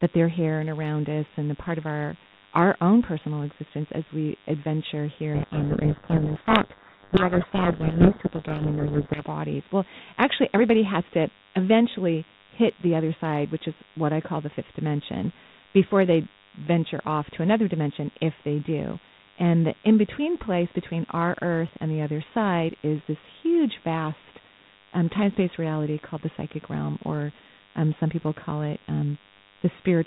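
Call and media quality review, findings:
DECT cordless phone buzz, whole clip: steady thin buzz at 100 Hz, roughly 30 dB under the speech. A nearby DECT handset or base sends 10 ms radio bursts that the audio path rectifies. Spectrogram shows a 100 Hz harmonic comb in every gap.

Codec payload misread, 5.34–9.22 s, starting right after "existence as we adventure": speech buried under harsh, rasping distortion. G.726 code words are unpacked with reversed bit order, so each sample decodes wrongly. Spectrogram shows a broadband smear up to the 4 kHz band edge, with speech formants obscured, and the waveform becomes dense and jagged.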